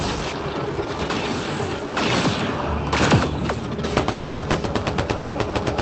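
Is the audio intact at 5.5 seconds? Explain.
No. From 5.49 to 5.55 s there is a short stall from a late packet: the jitter buffer ran dry, so about 40 ms of the last sound was stretched and held with a faint buzz or dip. Unlike a dropout, nothing is missing; the audio resumes at the same point, just 40 ms later.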